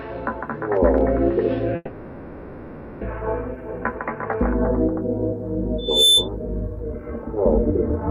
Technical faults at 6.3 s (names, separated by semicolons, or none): loudspeaker feedback squeal